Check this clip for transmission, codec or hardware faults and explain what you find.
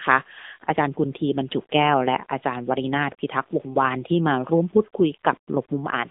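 One fault runs through the whole recording: the speech has passed through the AMR narrowband mobile codec. From start to finish the band sits between about 250 Hz and 3.7 kHz with nothing above, and the voice sounds plainly buzzy and synthetic. The codec rebuilds speech from a vocal-tract model excited by sparse pulses, and the plainly audible coarseness fits an AMR-NB mode near 8 kbps. That buzz sets it apart from a plain telephone-band filter.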